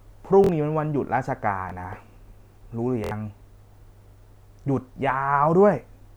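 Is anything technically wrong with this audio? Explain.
Yes. Repeated buffer faults occur at 0.44 to 0.49 s, 1.70 to 1.72 s, 3.04 to 3.11 s and 4.62 to 4.64 s. Fresh audio failed to reach the output in time, so the device replayed its last block of about 23 ms, which fits a 1024-sample buffer. That block repeats twice, once, three times and once respectively, with a hard join at each repeat. The result is a brief stuttering buzz in the speech, while roughly 50, 20, 70 and 20 ms of real sound go missing.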